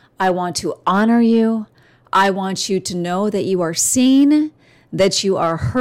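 The clip is speech with hard clipping in five loud passages: 0.21–0.31 s, just before "want to"; 0.87–1.44 s; 2.15–2.30 s, just before "want you to know"; 3.80–4.34 s, after "know that you are"; and 5.0 s to the end. Overdrive is about 1 to 6 dB, worst near 2.2 s. Peaks are sliced flat at the overloaded stage's limit, giving abrupt high crackle rather than the rounded, gradual thickening of soft saturation.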